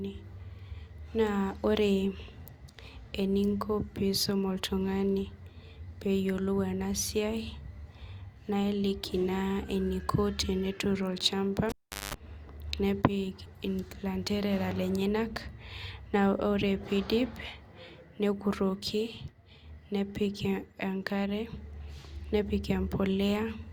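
A cable pulled and plugged in interrupts this speech clip from 11.69 to 12.14 s. A pop marks the moment the live lead comes out, and the audio drops to near silence for about 0.4 s. As the plug goes back in, only its tip touches at first, so the unshielded contact picks up a 50 Hz mains buzz lasting about 0.2 s. A second pop follows as the connection seats fully and the sound returns.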